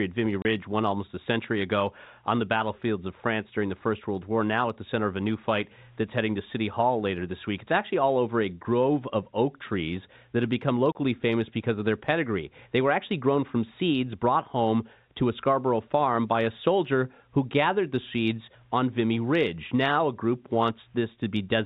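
Speech, heard through a telephone-band channel with nothing above 4 kHz, consistent with G.711 telephone coding, is twice cut by sudden 30 ms holes of dead silence: from 0.42 to 0.45 s, just before "won almost a century", and from 10.92 to 10.95 s, between "trees that have become" and "famous because of their". This is packet loss filled with silence. Each gap matches a single lost packet, and the receiver inserted silence, so the waveform drops abruptly to silence and back.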